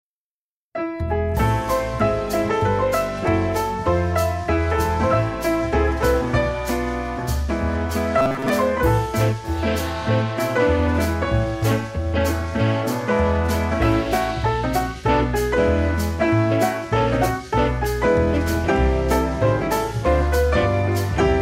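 From 8.18 to 8.50 s the sound turns into a rigid, metallic buzz pitched at about 133 Hz, only loosely tracking the underlying audio. This is robotic sound from repeated short buffers, likely caused by late-arriving audio being covered by looping a roughly 7.5 ms fragment over most of that stretch.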